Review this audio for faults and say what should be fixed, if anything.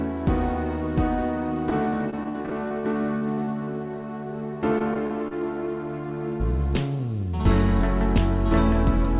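Repeated packet loss (robotic sound) occurs from 1.7 to 3.69 s and again from 4.47 to 5.33 s. Frequent short holes, up to 52 ms long, are patched by extending the preceding sound, which produces choppy chunks with pieces missing. On a spectrogram these show as repeated frozen, smeared slices. The waveform shows short repeating segments with abrupt joins.

Prevention: a better-provisioned network path, a larger jitter buffer and redundancy or forward error correction would stop the repeated concealment.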